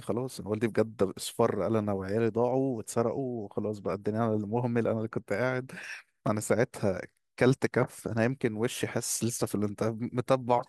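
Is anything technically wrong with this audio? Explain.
No, nothing in this speech recording points to a technical problem with the signal.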